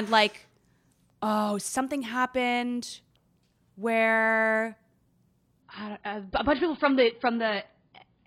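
A connection slowdown made the adaptive stream switch to a lower-bitrate rendition at 5.62 s, and it stays there until the end of this short speech clip. The change is abrupt with no gap. From that point nothing above 5.2 kHz remains, so the treble vanishes and the sound turns dull, with coding artefacts rising. That fits an AAC stream falling from around 96 kbit/s to roughly 16 kbit/s.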